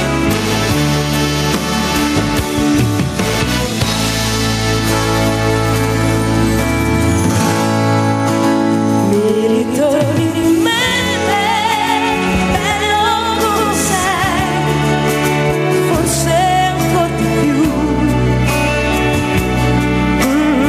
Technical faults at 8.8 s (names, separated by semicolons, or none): gain pumping; doubled audio track